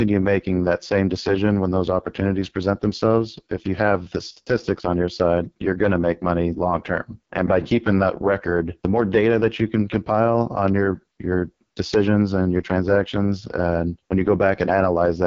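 From start to finish the speech is carried through the AMR wideband (HD Voice) codec, and it sounds badly damaged. The tone is rough and raspy throughout. That grain points to the codec's lowest mode, around 6.6 kbit/s. At that rate the pulse-driven model of the vocal tract has too few bits to follow the voice closely. Nothing is heard above about 7.4 kHz. The top band sounds like shaped hiss rather than real detail.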